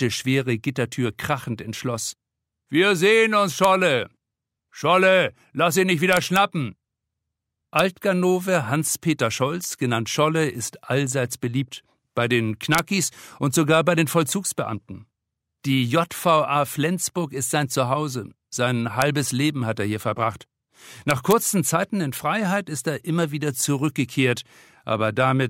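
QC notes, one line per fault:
3.64, 6.13–6.36, 7.79, 12.75–12.79, 19.02 and 21.11–21.32 s, integer overflow: violent cracks on loud peaks, harsher than clipping, because samples past the integer limit wrapped to the opposite extreme instead of being held.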